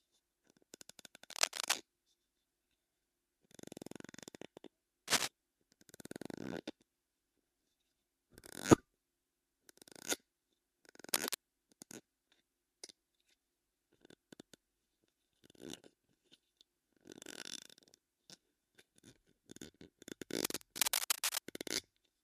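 Cable scratch noise appears at 1.31 to 1.75 s, 5.08 to 5.28 s, 11.14 to 11.37 s and 20.45 to 21.42 s: dense, uneven bursts of scratching sitting somewhat louder than the sound itself, likely from a worn cable or connector being moved.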